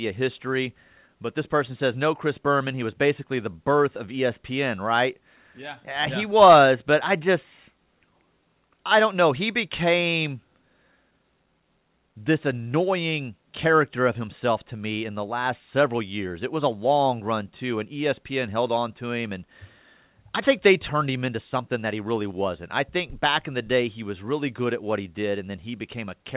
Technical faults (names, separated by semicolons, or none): none